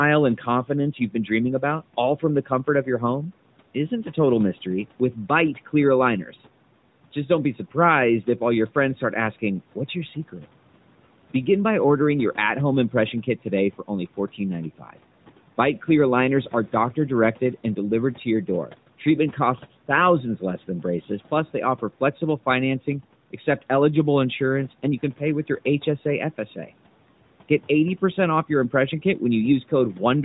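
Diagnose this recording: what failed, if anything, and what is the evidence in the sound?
The noise suppressor in the call processing mistook speech for background and cut it at 14.78–14.97 s, by about 12 dB, leaving that stretch swallowed and faint.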